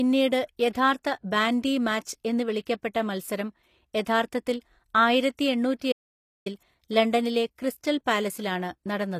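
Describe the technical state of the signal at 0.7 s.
Pre-echo runs from 0.70 to 0.75 s, just before "ബാൻഡി മാച്ച് എന്ന്". The transform codec spreads quantisation noise across its whole block, so noise scaled for the loud attack leaks about 45 ms ahead of it. That gives a brief hiss and a softened, smeared onset.

HE-AAC compression is plainly audible throughout and is the likely source of that pre-echo. The treble is rebuilt from copied lower bands and stops at 15 kHz, so sibilants sound gritty and metallic, consistent with a bitrate around 24 kbps.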